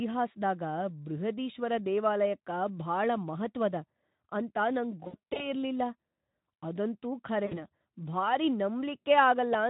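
At 5.03 to 5.53 s, just after "ಅಂತ ನಂಗ್", VoIP packet loss concealed by the speech codec: about 160 ms of audio went missing in runs of up to 60 ms, and the decoder filled the gaps by stretching the last sound into a fading buzz or coloured noise. At 7.46 to 7.66 s, three lost frames totalling 60 ms smear briefly in the same way.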